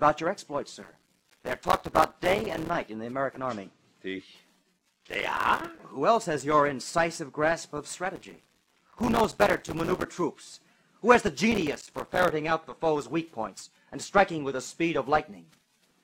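The processor repeatedly falls behind its tiny buffers, a few milliseconds each, and every missed deadline drops a gap of silence with hard edges. The result is processor overload crackle, a gritty tearing over the sound from 0.82 to 2.70 s, 4.74 to 5.80 s, 8.16 to 10.05 s and 11.52 to 12.32 s.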